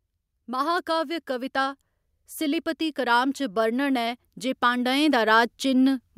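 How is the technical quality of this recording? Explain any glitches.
The recording has one fault, automatic gain rising. From 2.38 s to 6.07 s the automatic gain control judges the input too quiet and gradually raises its gain by about 7 dB, so the voice and background noise swell together. A speaker moving closer would lift only the voice.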